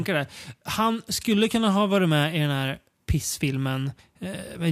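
Nothing in the recording stands out as a technical fault, so there's nothing here to walk through in time order.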